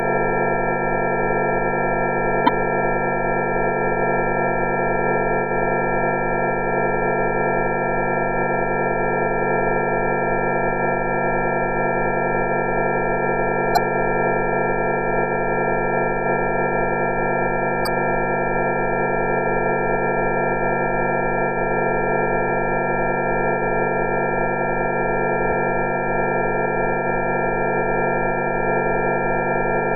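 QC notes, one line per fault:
2.45–2.49 s, 13.73–13.77 s, 17.83–17.88 s, 22.46–22.50 s, 25.49–25.53 s: damaged data in a compressed stream. Each is a short chirp or blip of about 40–45 ms where corrupted frames are misread or dropped, and the decoder loses sync until it finds the next frame header.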